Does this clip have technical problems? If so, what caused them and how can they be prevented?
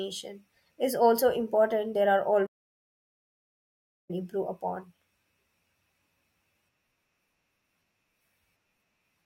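Yes, a playback stall: the speech cuts out at 2.46 s and stays silent for 1.63 s until 4.11 s, then carries on. Likely the player ran out of data or its thread blocked. A bigger buffer and a non-blocking audio thread should prevent it.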